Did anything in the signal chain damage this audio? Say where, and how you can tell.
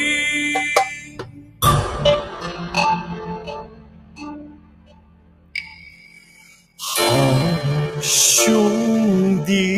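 Yes, and it starts in the call processing stage. A speech-tuned noise suppressor was left running on music or other sounds for the whole clip. It treats anything steady, like sustained tones, ambience and reverb tails, as noise to be pulled down. Onsets punch through and then the level sags, and the gain swings by around 20 dB throughout. That's why the whole thing pumps and sounds thinned out.

You can hear spots where the suppressor cut the sound harder than the rest. The first runs from 0.99 to 1.62 s, and the second is much longer, from 3.39 to 6.79 s, covering roughly 3.7 seconds of material in total. At the deepest points the level falls by about 15 dB. Sustained and decaying parts sink or get their tails chopped, while sharp attacks mostly survive, which is classic suppressor behaviour rather than a real change in the source.

From 2.02 s to the end there's a time-stretched section, most likely from editing or playback software conforming the audio to a length. 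The pace abruptly drops to about 0.61 times normal speed while pitch stays put. The stretcher holds pitch by repeating short chunks, so this slowed stretch drags.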